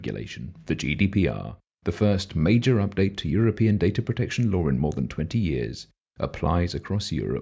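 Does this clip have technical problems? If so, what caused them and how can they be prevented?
No, there are no technical problems in this clip.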